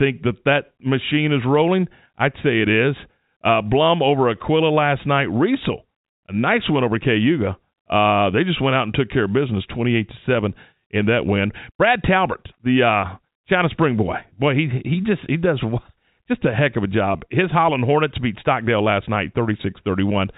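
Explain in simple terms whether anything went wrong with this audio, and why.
Nothing went wrong with this speech recording. It came through an ordinary internet call using the standard telephone codec, G.711, which keeps nothing above about 4 kHz, so it has the slightly narrow, muffled sound of a normal phone call.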